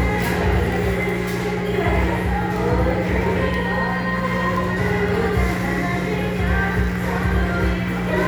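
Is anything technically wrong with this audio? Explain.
Yes. Mains hum runs throughout the clip: a steady 60 Hz tone, with some low harmonics, sits only a little below the level of the sound itself. A ground loop or nearby transformer is letting the power line leak into the signal, producing a constant low drone underneath everything.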